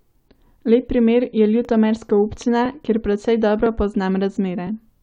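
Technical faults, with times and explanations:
0.64 s and 1.65 s: overlapping chunks. Each new one-second chunk starts early, so about 7 ms of speech plays twice, giving a brief click or stutter.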